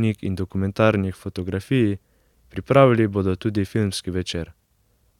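Nothing technical stands out in this bit of speech; there's no glitch or defect to point to anywhere in it.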